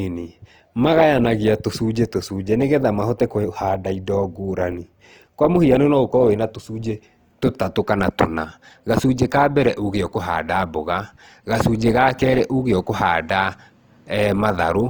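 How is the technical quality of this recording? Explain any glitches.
The recording has one fault running through all of it: plainly audible Opus compression.

From start to finish the speech has a grainy, rough texture, with harmonic detail smeared into a noisy haze. The codec keeps each frequency band's energy but, short of bits, fills the fine structure with folded or noise-like content. Unlike MP3 damage, there's little swirling or watery warbling and no holey spectrum. Content extends to about 20.2 kHz, so the bandwidth isn't narrowed. The sound likely points to Opus's full-band music mode at a low rate near 24 kbps.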